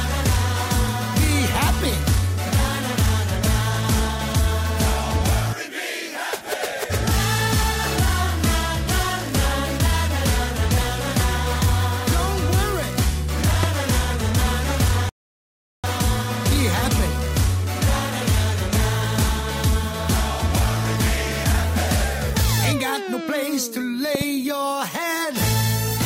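There are two loud pops here: a single sharp one from 13.63 to 13.66 s, roughly 15 dB above the sound, and a quick double pop from 24.15 to 24.24 s, around 10 dB over it. The audio carries on underneath both, so they're likely voltage spikes from a plug, switch, static or driver glitch. Then there's a rebuffering stall at 15.09 s, where the player ran dry, went silent, and picked up exactly where it stopped at 15.84 s, adding about 0.75 s without losing any audio.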